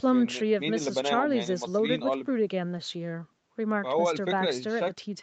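No faults are audible in this speech; the top end stops at 8 kHz, consistent with normal call microphone processing and an Opus call path limited to that bandwidth.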